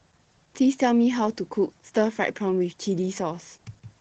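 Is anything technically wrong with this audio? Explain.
Yes. Throughout the speech, the signal has passed through Opus voice compression running in its SILK linear-prediction mode at a low rate, which fits roughly 12 kbps. The coder keeps only a wideband signal up to 8 kHz, so sibilance and air above that are gone, and it describes the excitation coarsely. The result is plainly audible: the speech sounds muffled and somewhat hoarse, with a slightly robotic, synthetic edge.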